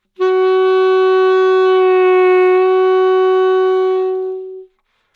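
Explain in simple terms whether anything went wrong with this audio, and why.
Nothing went wrong with this audio: the sounds in it come through with no technical faults to point to.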